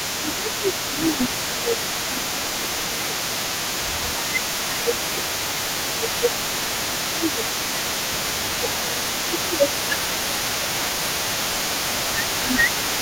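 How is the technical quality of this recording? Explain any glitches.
Two call-processing faults are present: one throughout, one intermittent.

Echo leak, 0.0 to 13.01 s: a delayed copy of the speech, roughly 10 dB down and 288 ms late, likely from a loudspeaker echo the canceller left unremoved.

Speech suppressed in double talk, at 0.17 to 0.63 s, 1.17 to 3.1 s, 4.02 to 5.64 s, 5.98 to 7.94 s, 8.62 to 9.01 s, 9.44 to 10.69 s and 11.33 to 12.91 s: the speech dips by up to about 10 dB, likely because the echo canceller turns everything down when both sides overlap.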